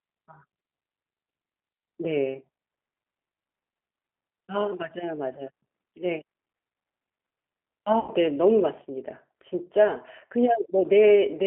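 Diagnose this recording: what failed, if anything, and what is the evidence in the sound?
The codec stage failed audibly, through the whole recording. This is G.729 coding. The sound is confined to roughly 250 Hz to 3.4 kHz, with nothing above. Plainly audible damage runs throughout: a rough, slightly synthetic texture. That texture fits an 8 kbit/s codec. It models the vocal tract with a filter and a pitch predictor, then adds a few coded pulses per frame. Detail that model cannot capture is lost.

The network stage also failed, at 8.00 to 8.13 s. This is VoIP packet loss concealed by the speech codec. About 80 ms of audio never arrived, which fits a handful of lost packets. The decoder filled the gap by repeating its last pitch and filter settings with falling gain. The speech is stretched into a fading sound there. Because each frame builds on the previous one, the distortion lingers briefly after packets resume.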